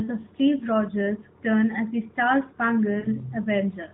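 From 3.00 to 3.08 s come lost AMR speech frames: about 40 ms, fitting two 20 ms frames. The decoder carries its last pitch and vocal tract settings forward at falling gain, so the speech smears into a brief, drawn-out dip, not a plain dropout's hard silent gap.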